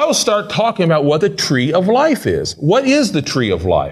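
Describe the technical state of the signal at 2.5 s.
At 2.5 s the speech signal is intact, with no dropout, clipping, glitch or other fault at that moment.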